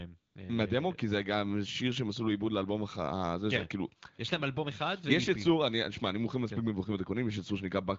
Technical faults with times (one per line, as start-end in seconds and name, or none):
0.19-0.35 AMR comfort noise